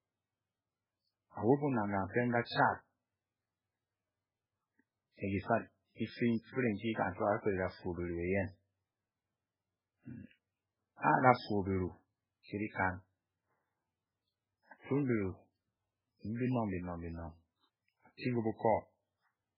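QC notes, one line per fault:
throughout, MP3 compression: the treble stops dead at 5.3 kHz, and weak detail flickers in and out, giving a watery, swirly sound with smeared consonants. On a spectrogram there is a hard ceiling and patchy, blocky energy below it. The heavy damage points to a very low bitrate near 8 kbps, likely from MP3 encoding.
16.35–16.40 s, pre-echo: a short hiss spreads about 48 ms ahead of a sharp onset, so the attack sounds soft rather than crisp. The codec smeared the onset's quantisation noise across its block into the quiet before it. On a waveform or spectrogram a low noise smear precedes the transient.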